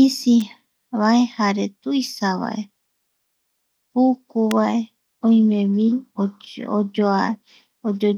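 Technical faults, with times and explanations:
0.41 s and 4.51 s, electrical switching spike: a sharp snap sits on top of the speech each time, peaking around -15 dBFS at the first and a much louder -5 dBFS at the second. Each is likely an arc from a nearby switch or motor coupling into the audio line.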